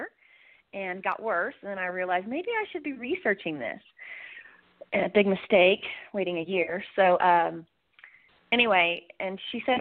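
No technical faults are audible.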